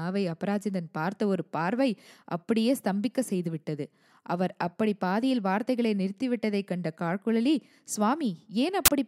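A sudden burst of very loud white noise with hard edges appears near the end, from 8.86 to 8.88 s. This is file tags played as audio: the compressed data of an embedded cover picture was read as if it were sample values, producing this brief static.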